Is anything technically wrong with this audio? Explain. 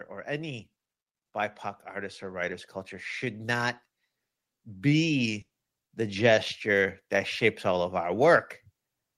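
Yes. From 5.41 to 5.53 s, just before "the gesture that shapes", a burst of packet loss: the receiver stretches the last sound for about 100 ms, fading it out, and then about 100 ms of speech is skipped.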